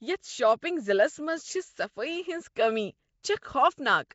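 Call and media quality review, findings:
Rough, hissy halo and a smeared, underwater feel on the speech throughout; nothing above 7.7 kHz. Likely Nellymoser compression at something like 32 kbps: fixed bits per sample, so weak bands get zero bits and are refilled with noise. The damage is plainly audible.

Pre-echo: a brief hiss just ahead of attacks at 0.60 s (19 ms) and 3.23 s (12 ms), softening the onsets. It comes from the transform codec spreading quantisation noise across a whole block, so noise sized for the attack leaks into the quiet moment before it.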